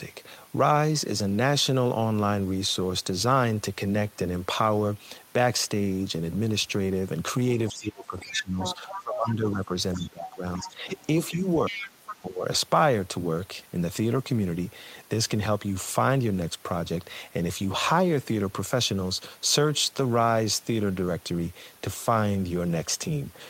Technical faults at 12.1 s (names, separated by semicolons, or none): other side's voice leaking through; speech suppressed in double talk